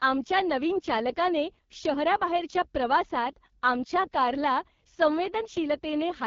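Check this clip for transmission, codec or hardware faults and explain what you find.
One codec fault runs through the whole speech clip: AMR wideband (HD Voice) coding at a very low rate. Nothing is present above about 7.2 kHz. Below 6.4 kHz the vocal tract model has too few bits, and 6.4 to 7 kHz is noise-filled, so speech sounds rough and raspy throughout. The heavy damage fits the lowest 6.6 kbit/s mode.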